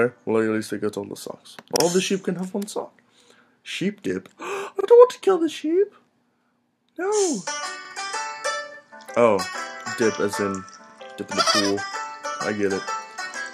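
At 1.76, 4.81, 7.85 and 10.90 s, overlapping chunks replay 44 ms at each 3-second join, heard as a stutter and seen as a duplicated waveform segment with a vertical spectrogram seam.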